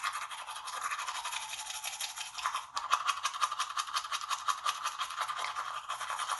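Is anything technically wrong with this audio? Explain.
Yes, there's clear codec damage throughout. It sounds like Bluetooth LC3 compression, most likely, where the encoder zeroes much of the upper spectrum and patches it with noise. Nothing comes through above 11.5 kHz, and the top end has a grainy, breathy edge, which fits roughly 48 kbps with 10 ms frames.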